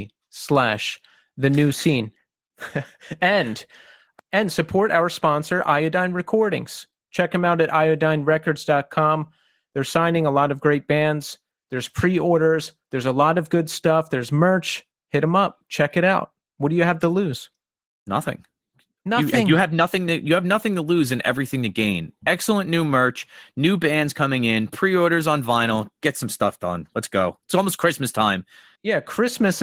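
Throughout the speech, Opus voice compression runs at a low rate, one that fits about 16 kbps. A linear-prediction core coarsely codes everything below 8 kHz, with a thin transform layer above it. The damage is plainly audible: a muffled, hoarse, slightly robotic voice.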